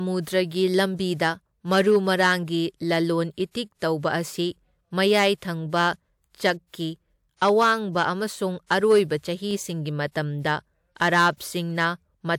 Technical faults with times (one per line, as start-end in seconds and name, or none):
0.00-12.38 hard clipping
9.51 repeated buffer